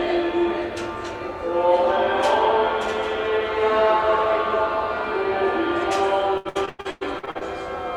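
From about 6.37 s to 7.43 s the sound breaks up with repeated packet loss, giving it that robotic quality. There are ten separate holes packed into that second or so, the longest around 101 ms. Each one gets papered over by stretching out the last bit of audio received, so roughly half the stretch is really concealment. You hear it go choppy, with chunks missing.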